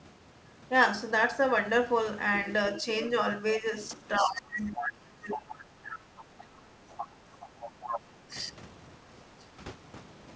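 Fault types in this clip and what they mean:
speech suppressed in double talk: The echo canceller likely mistook overlapping talk for echo and ducked the talker, with dips up to about 25 dB around 3.95 to 5.57 s.
other side's voice leaking through: Loudspeaker echo likely escaped cancellation, so a second voice sits underneath, about 10 dB below the talker, from 4.16 to 8.0 s.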